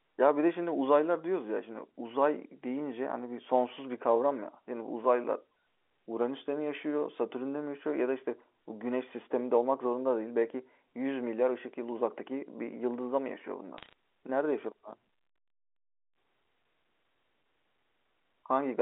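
At 13.50 s a loudspeaker feedback squeal begins: a single steady tone at 4.7 kHz that swells over roughly two seconds until it sits a few decibels above the speech, then stops at 16.43 s. A microphone is picking up the loudspeaker it feeds, and at that one frequency the loop gain exceeds one, so the tone keeps reinforcing itself. Unlike a constant whistle or hum, it is not present from the start but grows out of nothing.

While the squeal is still building, from 13.78 s to 13.93 s, bit errors on a digital phone line add a short burst of sharp ticks and crackle. A small fraction of the bits on the G.711 line flipped, which points to a handful of frames being hit. Each flipped bit corrupts just one sample, so it clicks where the sign or a high-order bit changed. The speech underneath stays intact, which sets this apart from dropouts or clipping, where the sound itself is lost or flattened.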